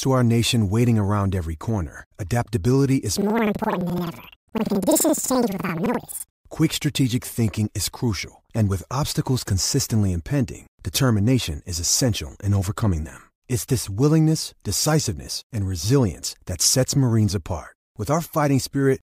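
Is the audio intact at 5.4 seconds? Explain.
No. From 3.17 to 6.49 s, planar audio is read as interleaved. Each 85.33 ms block of separate left-then-right samples is taken as alternating pairs, so it plays twice at double speed. The speech jumps an octave higher with an 11.7 Hz flutter until "quick strategic thinking is".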